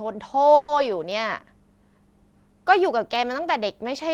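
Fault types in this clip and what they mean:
Call audio freeze: Speech stalls between 0.55 and 0.71 s while the last sound is drawn out as a fading buzz or hiss for about 130 ms, likely from delayed packets draining the jitter buffer. Nothing is lost afterward. A waveform shows a smeared, decaying stretch, and a spectrogram shows frozen horizontal bands.
Periodic USB or driver dropouts: From 1.12 to 3.16 s, tiny silent gaps of roughly a tenth of a millisecond recur every 1.024 s, about three in all. They are heard as regular ticks in the speech. Each appears as a hairline notch in the waveform and a thin vertical line on a spectrogram.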